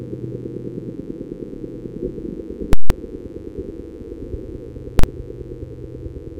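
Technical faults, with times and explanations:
Throughout, mains buzz: a steady, raspy buzz sits under the sound at roughly 20 dB below it. Sharp switching spikes from a dimmer, rectifier or unshielded line enter twice per 50 Hz cycle, so the buzz carries a dense ladder of harmonics spaced 50 Hz apart that climbs into several kilohertz. On a spectrogram this shows as evenly spaced horizontal lines running the full length of the clip, unbroken by anything the sound does.
2.73 to 2.90 s and 4.99 to 5.04 s, invalid numbers at full scale: a calculation produced infinite or invalid values, which were clamped to an extreme value, so the output pins flat far beyond the audio's peaks. The first block lasts 0.17 s, which fits an 8192-sample buffer, and is heard as a very loud pop on entry and exit with nothing between. The second, 0.04 s, fits a 2048-sample buffer and lands as a single bang. The waveform shows flat slabs, the spectrogram full-band vertical edges.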